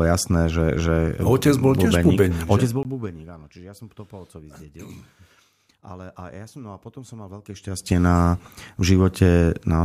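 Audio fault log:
2.83 s, block of digital silence. The speech drops to silence for about 19 ms, just before "bubeník áno čiže ja". The signal stops and restarts with no fade, so this brief gap sounds like a short hole.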